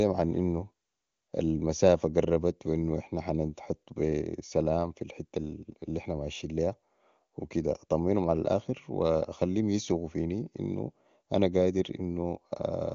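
No technical faults are audible.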